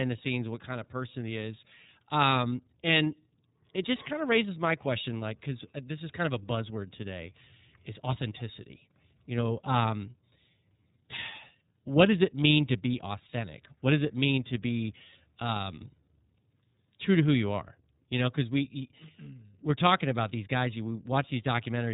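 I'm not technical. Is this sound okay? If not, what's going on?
No. The speech runs through the iLBC codec for the whole clip, a compression scheme built for internet phone calls. Nothing above about 3.8 kHz survives, so the voice sounds boxed-in and thin, like a phone line. Unlike a simple treble cut, which only muffles, this also makes the voice slightly rough and synthetic. Each 30 ms slice is rebuilt on its own rather than from the one before, which leaves that plainly audible artificial edge throughout.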